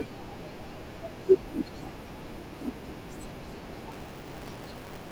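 From 3.92 s to the end, buffer tearing sets in. Writer and reader have slipped, so a slice of each period replays audio from about 20 ms earlier. This gives a robotic 200 Hz rattle over the speech.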